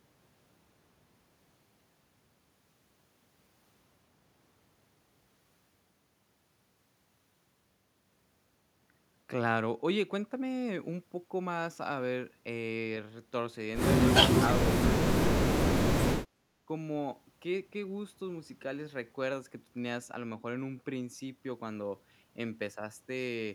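Speech suppressed in double talk shows up three times, at 14.22 to 14.65 s, 14.92 to 15.22 s and 15.5 to 15.59 s. The speech sinks abruptly in short pieces, each lasting a fraction of a second and dropping by around 25 to 30 dB at its deepest, so syllables seem chopped away. The likely cause is an echo canceller hearing both ends talking at once, mistaking the near talker for loudspeaker echo and pulling the level down.

Background gated by the echo canceller follows at 16.26 to 16.52 s. The room sound dips by about 12 dB for roughly a third of a second and then comes back. Here the canceller clamps the microphone down while the far end plays through the loudspeaker, taking the ambient noise with it. When it releases, the background returns, leaving a brief audible hole in the room tone.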